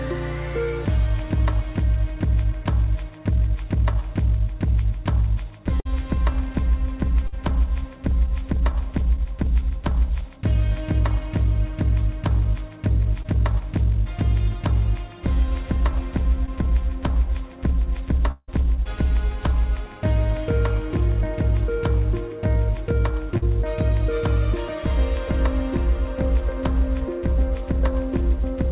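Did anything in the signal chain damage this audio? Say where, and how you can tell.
Yes. Bursts of packet loss on the network dropped about 60 ms at 5.80–5.87 s and 7.27–7.34 s. The receiver stretched the last sound into a fading tail, then jumped ahead.

Short concealed packet loss hit at 13.22–13.26, 16.46–16.49 and 23.38–23.44 s, losing 20 to 40 ms each. Decoder concealment bridged each gap, leaving a brief smear or wobble.

From 18.31 to 18.50 s, about 160 ms never arrived, likely a long network dropout. Concealment fills it with a fading continuation, ending in a moment of silence.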